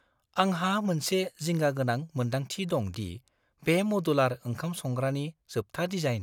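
At 1.44 s, just after "आंहा मोनसे", a bit error spike occurs. One stored or transmitted bit flipped, so the sample value jumped by a power of two and snapped straight back. It reaches about -29 dBFS and sounds like a single dry tick, broadband and unrelated to the speech. At 2.94 s a second bit error spike follows. It peaks higher, at about -23 dBFS, and the corruption spans a few consecutive samples.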